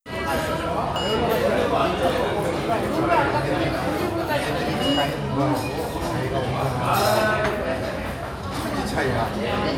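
At 0.96 s and again at 3.64 s the sound jumps abruptly, as if a slice were cut out and the two ends butted together. About 70 ms is missing at the first point and about 40 ms at the second. This is likely a dropped buffer (overrun), where samples were overwritten before being read. Unlike a dropout, no silent gap separates the two sides. The audio simply skips ahead.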